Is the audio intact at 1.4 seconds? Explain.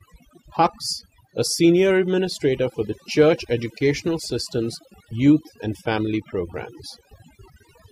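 No. Overdone noise removal runs throughout the speech, including 1.4 seconds. The suppressor cuts frequency bands near its noise estimate, so the background drops and breaks up into twinkling specks.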